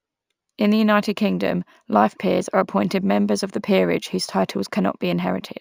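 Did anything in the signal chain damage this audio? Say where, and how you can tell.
Yes. Imaging from linear upsampling at the sample-rate conversion stage, throughout: 16 to 48 kHz by straight-line interpolation leaves dulled highs and metallic 8–16 kHz images, about 30 dB down.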